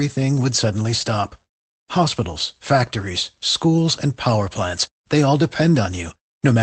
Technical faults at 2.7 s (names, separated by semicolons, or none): none